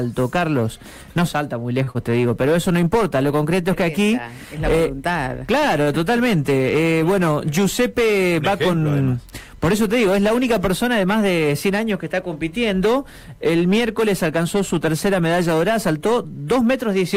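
Right at the start, at 1.83 to 1.90 s, there's a short stall from a late packet: the buffer ran dry, so the receiver held the last bit of sound for about 37 ms until the packet turned up, then carried on without losing anything. That hold adds 37 ms of delay. Straight after, from 1.91 to 1.98 s, comes a short concealed packet loss. About 40 ms of audio never arrived, and the receiver patched roughly 34 ms of it by extending the preceding sound before blending back in, so you hear a quick smear or wobble there. Later, from 14.28 to 15.07 s, there's a jitter buffer speed-up. The buffer had built up too much audio, so the receiver trimmed small pitch-period slices, about 50 ms in all. The audio runs at about 107% speed with the pitch unchanged and sounds slightly rushed.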